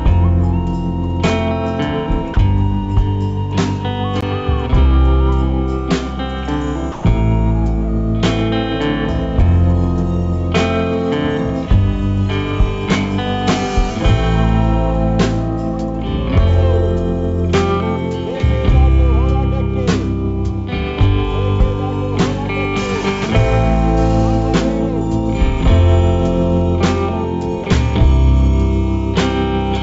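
A voice detector likely mistook the audio for background and stopped sending three times, at 2.34–2.36 s, 6.92–7.04 s and 27.64–27.66 s, so sound dropped by the voice detector gives way to steady comfort noise for 20, 120 and 20 ms. At 4.21 s, a 17 ms block of samples was replaced by zeros, a block of digital silence that cuts in and out with no fade, heard as a short hole. All of this rides on a call path whose band stops at 8 kHz, which fits G.722.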